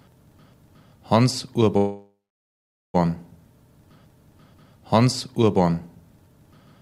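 Call audio freeze, 1.77 to 2.96 s: a fading continuation, 0.8 s of silence, then the sound resumes intact. Delayed packets likely emptied the jitter buffer.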